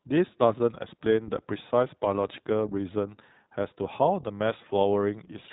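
Speech here, and it's been through the iLBC codec the whole way. Nothing gets past about 3.9 kHz, and each short frame is coded on its own, so the voice comes out plainly rough and synthetic, which fits iLBC's 20 ms mode at around 15 kbps.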